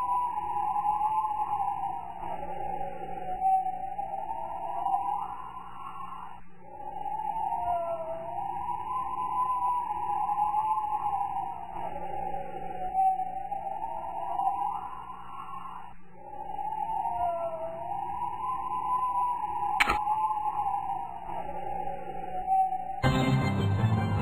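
Nothing stood out as a technical fault anywhere in the audio on listening.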